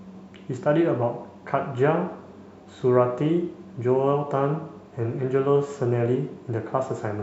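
No technical faults can be heard anywhere in the speech signal, which stays steady throughout.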